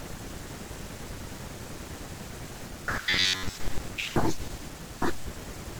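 Robotic sound from repeated short buffers hits this speech recording from 3.1 to 3.54 s, turning the voice into a rigid metallic buzz near 94 Hz. Audio likely arrived too seldom, so playback looped a roughly 10.7 ms chunk through most of that stretch, skipping fresh audio.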